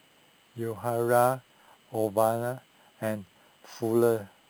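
Throughout the speech, imaging from sample-and-hold upsampling adds a bright, metallic fizz that rises and falls with the talker's level. Each original sample appears to have been repeated to fill a higher rate, with no smoothing filter. The pattern fits an original rate near 11 kHz. The lowest mirror copy sits between about 5.5 kHz and 11 kHz, about 20 dB below the signal. On a spectrogram that band shows flipped harmonic contours that fall as the pitch rises. Zoomed in, the waveform looks like a staircase.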